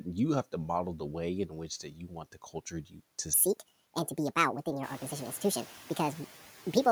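Noise suppressor artifacts run through the whole clip. Steady background is pulled down by about 9 dB frame by frame, so the noise sinks between the words and rises under the speech. At about 5 s the room noise rises by about 14 dB, settling about 20 dB below the speech, and the same processing acts on it.

Speech cut by the noise suppressor occurs twice. From 1.48 to 2.55 s, just after "to model the way", the suppressor treats parts of the speech as noise and dips them by up to about 11 dB, roughly half a second in total, so they sound swallowed. From 2.71 to 3.01 s a shorter stretch drops by about 12 dB.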